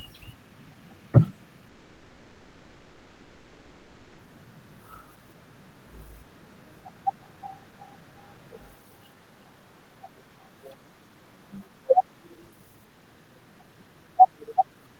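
At 1.68 s the speech stops and a long network dropout begins, lasting until 4.19 s. Likely no audio reached the receiver. The last sound is stretched into a fading buzz or hiss that fills the gap. Speech resumes with that part missing.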